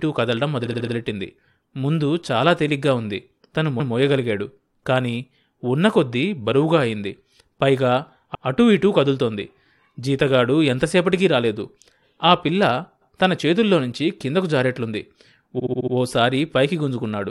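Repeated frames stutter this speech at 0.65, 3.79, 8.34, 13.01 and 15.58 s: a short block of compressed data plays again, 70 ms looped four times, then 139, 116 and 116 ms once each, then 70 ms five times.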